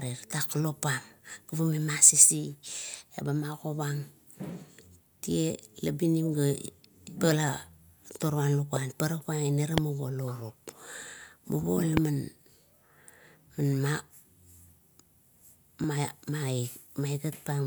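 Three loud pops land at 8.76–8.78 s, 9.78–9.80 s and 11.97–11.99 s, each a single sharp hit roughly 15 to 20 dB above the speech, which continues underneath. The likely cause is a brief voltage spike, from a plug, switch or static, entering the signal chain.

At 15.84 s a dropped buffer (overrun) makes the speech jump forward by about a millisecond and a half, likely because samples weren't read before the hardware overwrote them.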